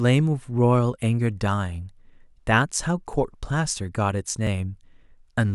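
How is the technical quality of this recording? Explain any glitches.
The speech has two small glitches, both repeated buffers, at 3.13 s and 4.47 s. Each time, fresh audio didn't reach the playback device in time, so it replayed the last chunk once more. The repeated piece is only about 5 ms long, so instead of an audible stutter you get a quick click or tiny buzz at each hard join. Since the repeat sits in an otherwise continuous stream, essentially nothing is lost.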